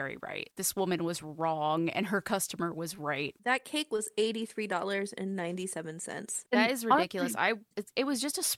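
Listening through the speech, nothing stood out as a technical problem at any point.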